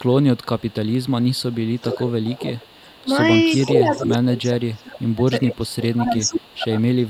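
Echo leak runs from 0.03 to 3.05 s and again from 3.52 to 5.12 s. A second copy of the speech trails the original by 420 ms, sitting roughly 15 dB below it. This is likely a far-end loudspeaker whose echo canceller let part of the microphone pickup through and sent it back down the line. From 5.43 s to the end at about 7.1 s the same 420 ms echo returns, much fainter, around 30 dB down.

Speech suppressed in double talk spans 3.64 to 6.74 s, overlapping both later echo stretches. During this stretch the talker's level falls away, at its deepest by around 30 dB, for about 3 s in all. The likely cause is the echo canceller failing to tell the near talker apart from the loudspeaker echo while both sides spoke at once, so it pulled both down together.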